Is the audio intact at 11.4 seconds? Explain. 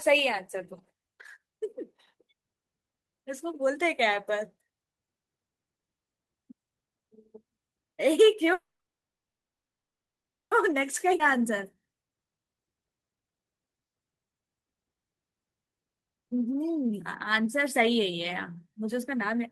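No. From 11.08 to 14.49 s a jitter buffer speed-up plays the speech about 19% fast: the receiver repeatedly cut pieces of one or a few pitch periods, roughly 0.7 s in all, so it sounds hurried at unchanged pitch. A spectrogram shows harmonics at normal heights but syllables squeezed closer together in time.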